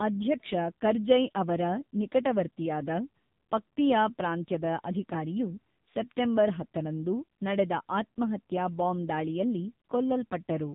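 From start to finish, the speech carries the sound of the AMR narrowband mobile codec. Nothing above about 3.8 kHz survives, so the voice is dull and boxed in. The codec rebuilds speech from a vocal-tract model fed by sparse pulses in short frames. Here the damage is heavy, which fits a low mode of roughly 6.7 kbps. Too few bits leave the voice buzzy and synthetic, with a phone-line thinness throughout.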